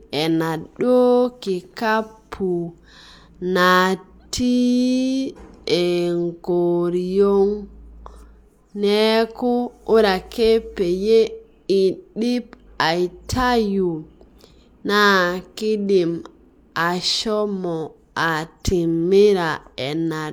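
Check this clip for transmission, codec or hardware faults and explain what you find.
No faults detected.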